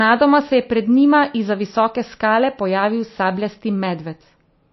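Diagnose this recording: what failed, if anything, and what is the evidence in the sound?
The failure sits at the codec stage. Throughout the speech there is nothing above 5.8 kHz, and the sibilants and upper consonants sound dull, as lossy coding leaves them. A large high-bitrate MP3 cannot show that ceiling by itself, so this is likely low-bitrate audio saved at a high bitrate: a first MP3 pass, consistent with roughly 25 kbit/s, stripped the top band, and re-encoding near 256 kbit/s only preserved the damage.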